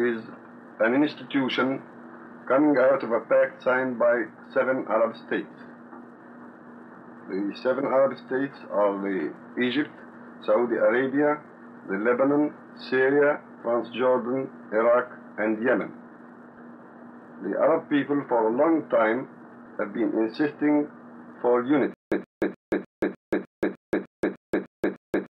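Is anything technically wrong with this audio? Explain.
Yes. From 21.94 s to the end, the audio breaks into a stutter with silent gaps. A burst of about 125 ms repeats 11 times, each followed by about 178 ms of digital silence, giving a steady cycle of roughly 302 ms. This is likely a stalled player or stream that replays its last buffered fragment at each retry and then runs dry. The material that should have played during those seconds is lost.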